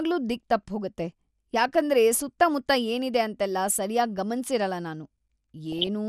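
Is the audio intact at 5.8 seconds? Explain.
No. From 5.72 to 5.87 s the speech breaks into a burble of short noise blips in single bands of the spectrum. This is DAB burbling: bit errors, here a fraction of a percent, slipped past error correction into the MP2 data, corrupting samples and scale factors across several frames.

Under that, the speech sounds dull and grainy with a gurgling edge. This is MP2 compression, likely at a low rate that fits about 80 kbps, where upper sub-bands are switched off and the remaining bands are coarsely quantised.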